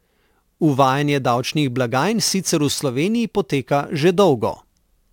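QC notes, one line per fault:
0.42 s to 5.13 s, sample clock jitter: the converter clock wanders by a few microseconds, so each sample is taken slightly off time and the error scales with how steeply the waveform is changing. The result is a grainy hiss riding on the speech at roughly 25 dB below it, strongest on loud and bright sounds like sibilants and gone in pauses. A spectrogram shows broadband noise that appears only where the signal is energetic. The waveform looks clean by eye.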